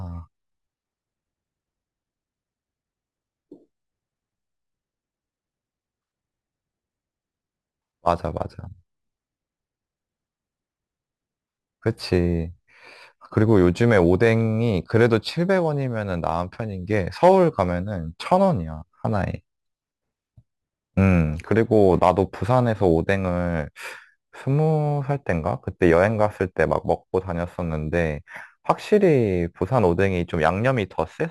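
From start to finish the speech carries a crude rate conversion fault. The sound points to a step from 44.1 kHz up to 48 kHz made by simply repeating the nearest sample rather than filtering. The resulting timing error recurs in a fixed pattern unrelated to the speech, leaving distortion roughly 35 dB below the signal. It is heard as a gritty, inharmonic fizz riding on louder and brighter syllables.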